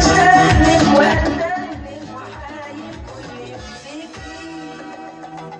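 At 2.91 s there is a tiny skip, lasting until 2.93 s. This is an overlap between stream segments. Two pieces of the stream claimed the same stretch of time. The player trimmed the doubled part, but that sound was never really repeated. So about 20 ms of audio is simply gone. The waveform jumps across the gap. The timing fits a boundary between 4-second segments.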